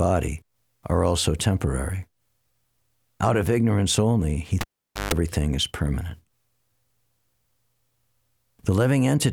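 At 4.61 s a live cable is pulled and plugged in: a pop, about 0.48 s of near silence, 0.15 s of 50 Hz mains buzz, then a pop at 5.14 s.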